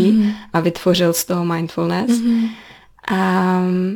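It's a short speech clip with crude rate conversion running all the way through. Samples seem to have been dropped, not filtered, which fits a 48 kHz to 44.1 kHz change. That leaves an inharmonic gritty fizz riding on the louder, brighter parts, sitting roughly 25 dB under the speech.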